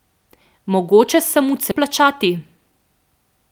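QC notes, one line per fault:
1.71–1.73 s, skip ahead: about 0.7 s of speech was dropped with nothing filled in, so playback jumps straight forward and joins the two sides almost seamlessly.
1.83–2.80 s, jitter buffer speed-up: with the buffer holding excess delay, the receiver repeatedly trimmed short pitch-period pieces, about a tenth of a second in total, so speech runs 108% fast at unchanged pitch and sounds hurried.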